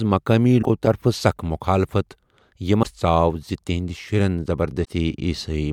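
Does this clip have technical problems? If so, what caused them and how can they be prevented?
Yes. Damaged data in a compressed stream causes brief disruptions at 0.59–0.65 s, 2.80–2.85 s and 4.81–4.89 s. Corrupted bytes make the decoder misread frames and lose sync. Prevent it with checksummed transfer and error-protected storage or streaming.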